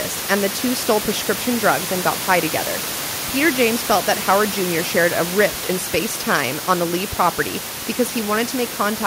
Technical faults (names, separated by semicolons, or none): none